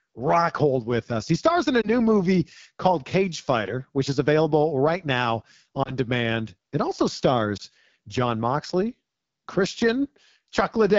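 A speech recording passed through the AMR wideband (HD Voice) codec at one of its lowest modes, which fits a rate of about 8.85 kbit/s. At that rate the pulse-driven vocal tract model has too few bits to follow the voice, so the speech below 6.4 kHz comes out plainly rough and raspy, and the top band up to 7 kHz is filled with shaped noise. The clip also has three lost AMR speech frames, where radio errors corrupted a frame and the decoder had to conceal it by repeating the previous pitch and vocal tract settings at reduced gain. Each one sounds like a single dropped frame: a short dip or warble rather than a fade to silence. The first is at 1.81 to 1.89 s, between "stars in a" and "movie called". The second is at 5.83 to 5.96 s, just after "is available right now". The third is at 7.57 to 7.62 s. After each, the voice briefly comes back weak.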